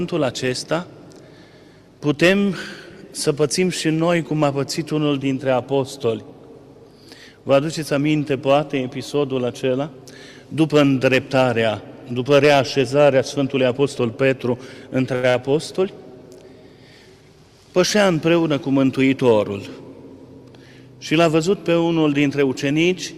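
At 15.15 s the sound hangs for a moment, with the last sound held longer than it should be and a faint buzzy flatness until about 15.29 s. This is a short stall from a late packet. The next packet was not there in time, the jitter buffer ran dry, and the receiver stretched the preceding audio for about 80 ms until it arrived. It then resumed from the same point, so nothing is lost, but everything after it now plays about 80 ms later.

Immediately afterwards, from 15.30 to 15.36 s, there is a brief smeared wobble, as if a sliver of sound has been blurred over. This is short concealed packet loss. About 40 ms of audio never reached the decoder, so the receiver filled the gap by extending what came just before it and then cross-faded back into the real signal.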